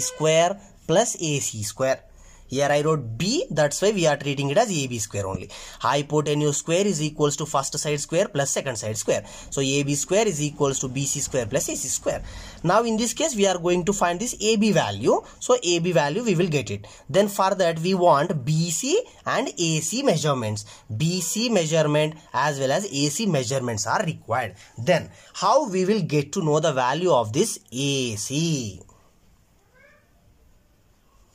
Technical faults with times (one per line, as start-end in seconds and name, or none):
5.35-5.37 loud pop